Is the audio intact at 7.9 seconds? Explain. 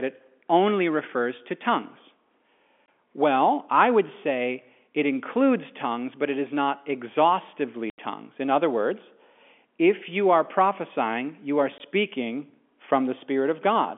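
No. At 7.9 s the sound drops out abruptly and stays silent until 7.98 s, an 80 ms hole with hard edges. This is packet loss filled with silence: data went missing in transit and the receiver played nothing in its place. The gap's length fits four consecutive 20 ms packets, the usual framing for the G.711 telephone coding carrying this narrowband line.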